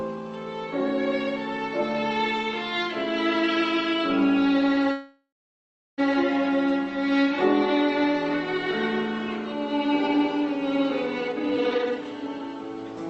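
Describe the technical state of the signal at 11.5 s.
A jitter buffer speed-up spans 11.21 to 12.44 s. The overfull buffer dropped repeated pitch-period slices, roughly 0.7 s in all, so the sound rushes at 162% speed without any change in pitch.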